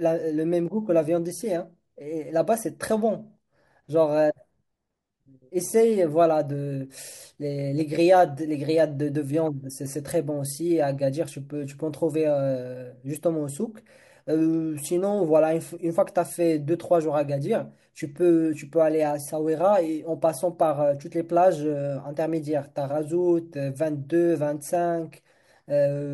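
Dropped samples at 24.75 s in this speech recording produce a single sharp click, likely from a handful of samples going missing so the waveform jumps abruptly.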